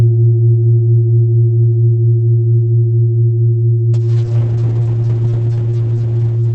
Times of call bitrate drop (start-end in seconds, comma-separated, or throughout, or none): 3.94-6.55